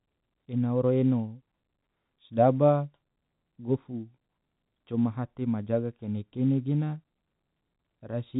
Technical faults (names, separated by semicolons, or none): none